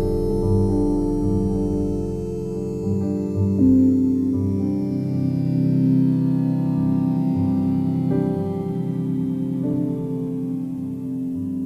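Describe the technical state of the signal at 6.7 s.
At 6.7 s the signal is intact, with no audible fault at that moment.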